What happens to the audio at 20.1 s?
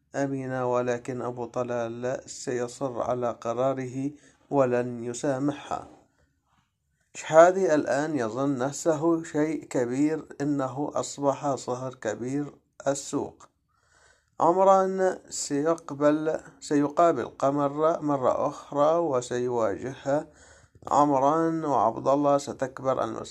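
Nothing goes wrong at 20.1 s: the audio runs through that moment intact, with no dropout, click, distortion or other fault to be heard.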